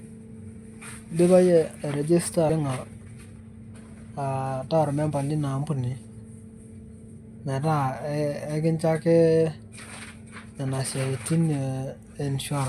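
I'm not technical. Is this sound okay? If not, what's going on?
No, not quite. Right after "idipa yie airejesta", at about 2.49 to 2.51 s, there's a skip ahead: roughly a second of speech got thrown away because newer audio was already queued, so playback jumps forward and the two sides are stitched together almost seamlessly.

Then come two jitter buffer speed-ups, from 2.59 to 3.41 s (about 11% faster) and from 4.45 to 5.11 s (about 12% faster). The receiver had built up a backlog and trimmed tiny slivers, roughly a tenth of a second in total each time, so the speech sounds rushed but keeps its pitch.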